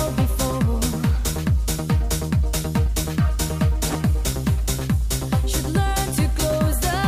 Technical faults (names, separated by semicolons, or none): USB whine